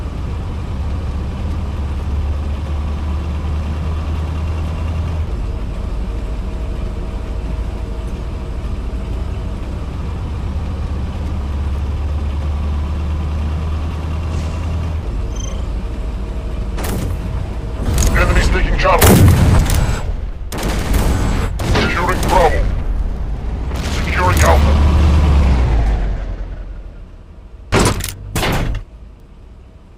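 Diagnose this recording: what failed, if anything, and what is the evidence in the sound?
Nothing failed; no fault is audible anywhere.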